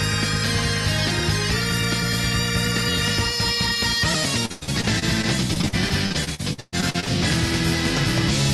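Repeated packet loss hits the call path from 4.45 to 7.09 s: 22 gaps, the longest 124 ms, each patched by stretching the preceding sound. Nearly a third of that span is concealment, so the audio turns choppy and robotic, with pieces missing, over an Opus-style band limit near 12 kHz.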